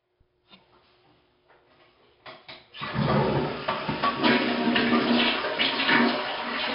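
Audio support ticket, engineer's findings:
4-bit ADPCM compression, whole clip. Gritty hiss riding every loud passage, rising and falling with level; smeared, distorted attacks where adaptive step size lags transients. Heavy damage. Nothing above 5.3 kHz, pointing to a low sample rate around 11 kHz and a stream near 44 kbps. Probable component: legacy encoder in capture or playback chain.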